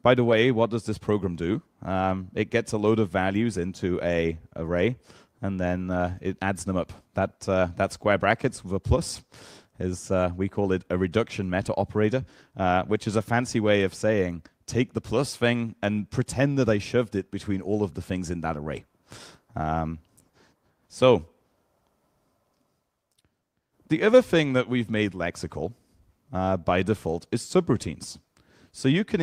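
No dropouts, distortion, glitches or level problems can be heard anywhere in the audio.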